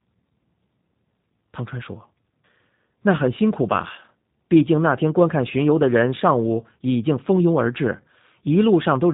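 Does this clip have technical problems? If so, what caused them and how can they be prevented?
Yes. Throughout, the speech passed through a G.729 codec, which rebuilds it from a vocal tract model and sparse pulses, consistent with about 8 kbit/s. Nothing above 3.8 kHz survives, leaving the speech audibly rough and synthetic. Prevent this by carrying the call on a wideband codec such as Opus or G.722 end to end.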